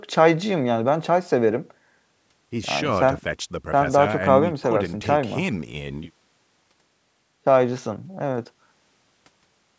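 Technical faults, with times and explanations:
No faults: the speech carries the normal high-pass of call microphone processing.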